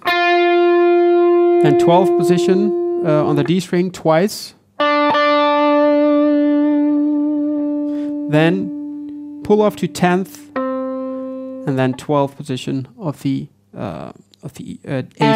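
At 9.65 s a short patch of noise blips, lasting about 0.1 s, breaks into the sound. This is DAB burbling: with weak reception, bit errors of about 0.1 percent slipped past error correction, putting short blips of noise into individual sub-bands, which fits roughly three corrupted MP2 frames.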